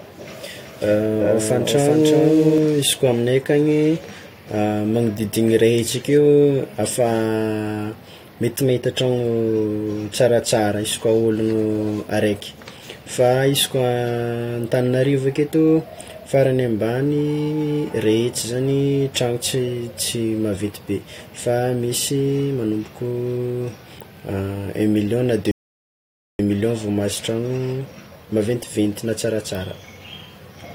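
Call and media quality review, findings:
Doubled audio track, 0.56 to 2.58 s: full-band second copy of the speech trailing by roughly 400 ms, a few dB quieter, dry, starting and stopping abruptly. Likely cause: second capture path or edit holding two misaligned copies.

Rebuffering stall, 25.51 to 26.39 s: hard cut to silence, then playback resumes exactly where it stopped, just before "million vao". Player buffer underrun waiting on download; nothing lost, about 0.88 s of time added.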